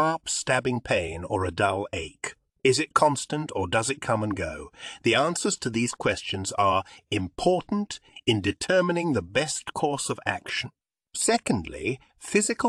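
No technical faults can be heard anywhere in the audio.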